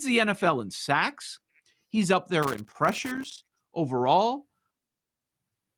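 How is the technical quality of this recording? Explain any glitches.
One glitch stands out in the speech. From 2.42 to 3.62 s, an irregular burst of scratchy crackle cuts across the sound. That is loose connector crackle: a worn or dirty contact keeps breaking and re-making as it shifts, chopping the signal into fragments, with any DC on the line adding pops.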